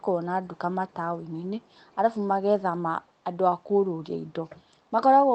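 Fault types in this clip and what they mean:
echo leak: a very faint, separate copy of the speech returns 391 ms late, likely past a far-end echo canceller; room reverb would smear instead.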